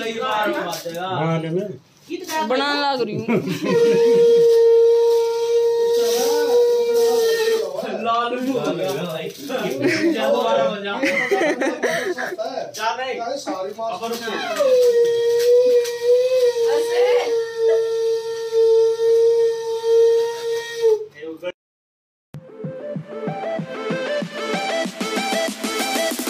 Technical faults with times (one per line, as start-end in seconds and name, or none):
none